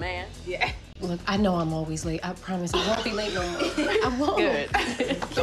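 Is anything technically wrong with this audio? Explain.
Yes. Separately encoded pieces were joined without trimming, leaving each encoder's start delay and final-frame padding in place: a gap at a join of encoded pieces, repeating every 2.0 s. At 0.93–0.95 s the sound drops into a 25 ms gap, and at 2.95 s into an 11 ms one. Each has smeared edges, and the sound resumes where it stopped.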